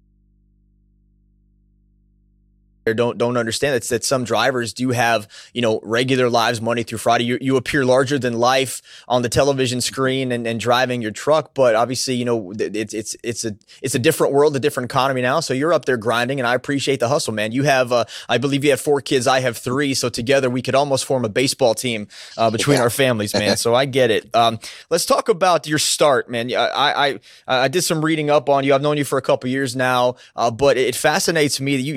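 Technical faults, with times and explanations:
0.00–2.87 s, audio dropout to a faint residue: the speech is already missing at the start, leaving only hum about 40 dB down, likely a lost input, until "don't don't understand that".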